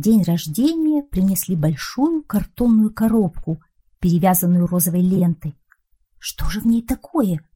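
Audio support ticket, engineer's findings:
Frames out of order, 5.16 to 5.21 s. Brief garbled flutter, about 50 ms. Likely the packetiser or jitter buffer delivered two adjacent frames swapped, roughly 23 ms each, consistent with 1024-sample frames at 44.1 kHz. No time lost. Waveform: discontinuities at start, midpoint, end. Spectrogram: content misaligned across the joins.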